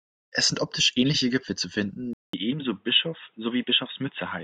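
At 2.13 s the speech cuts to silence for 200 ms. When it returns, it runs dull and boxy to the end. Nothing reaches above 3.8 kHz now. The level sits about 5 dB lower. A new background noise floor appears, roughly 45 dB under the signal. The likely cause is an input switched to a poorer device mid-recording, such as another microphone or a headset's call profile. That device brings a narrower band and its own tone and noise.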